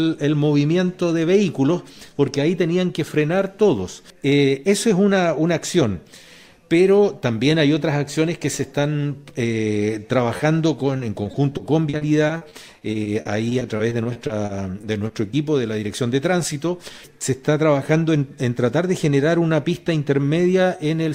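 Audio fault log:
10.37 to 10.41 s, short concealed packet loss. About 20 ms of audio never arrived in time. The decoder patched it by extending the preceding sound, then blended back into the real signal. It comes across as a brief smear or wobble.
10.97 to 15.35 s, repeated packet loss (robotic sound). Some two dozen short holes follow one another, the longest 40 ms. Each is filled by continuing the previous sound, totalling 600 ms, about 14% of the stretch. The quick succession of patches gives a choppy, robotic texture.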